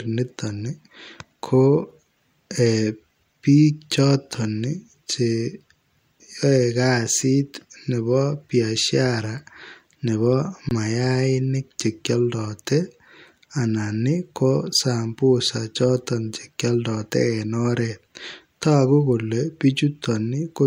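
At 10.69 s the speech drops out for 20 ms, until 10.71 s, in an underrun with held sample. The output buffer ran dry, and the converter froze on its last value, leaving a flat stretch of waveform. Entry into the gap is nearly click-free, but roughly 20 ms of live audio went missing meanwhile, so the signal jumps back in just before "mayainik chekioldote".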